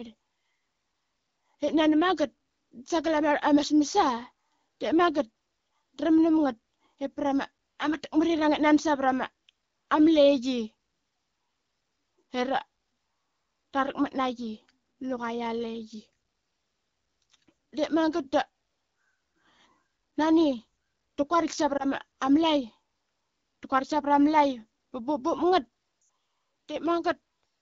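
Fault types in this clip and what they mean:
Lost AMR speech frames: a corrupted frame gets patched by the decoder repeating its last good pitch and vocal tract settings at falling gain. There's a brief dip or warble at 21.77 to 21.87 s, then a quick drop to near silence from 26.01 to 26.09 s, fitting about four 20 ms frames.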